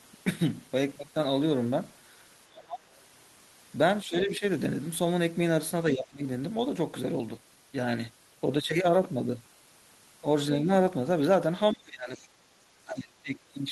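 A speech clip with repeated dips in the talker's level. This is speech suppressed in double talk. It occurs at 2.48–2.81 s, 4.04–4.43 s, 5.94–6.24 s, 11.73–12.34 s and 12.85–13.49 s. The deepest drops range from about 10 to about 30 dB. The likely cause is an echo canceller that turned the talker down while both sides spoke. At 12.15–12.24 s, the other side's voice is leaking through faintly, about 30 dB below the speech. It likely comes from loudspeaker echo that the canceller missed.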